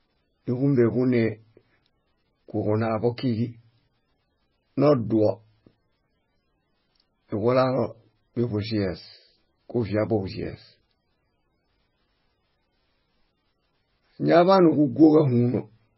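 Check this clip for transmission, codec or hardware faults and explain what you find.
One codec fault runs through the whole recording. Throughout the speech, nothing survives above 5.6 kHz, and the sound is heavily damaged: watery, swirling and smeared on consonants. This is likely MP3 compression starved of bits, which fits a bitrate near 14 kbps. The encoder cuts the treble and drops weak frequency lines that flicker between frames. On a spectrogram this shows as a hard ceiling at 5.6 kHz with patchy, blocky holes below it.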